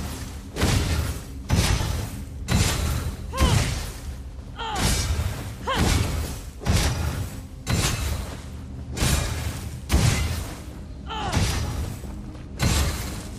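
No technical faults can be heard anywhere in this audio.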